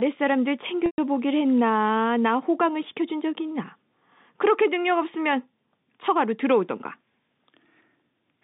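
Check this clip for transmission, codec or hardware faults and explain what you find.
One transmission fault shows up, a packet loss with pitch repetition from 0.86 to 0.98 s. About 120 ms of the speech went missing, which fits six 20 ms packets. The receiver filled the gap by repeating the last pitch period and fading it out, so the sound briefly holds a buzzy, frozen tone, dims toward silence, then cross-fades back. A plain dropout would cut straight to silence or click instead. The narrow telephone band of the G.711 coding can be heard throughout.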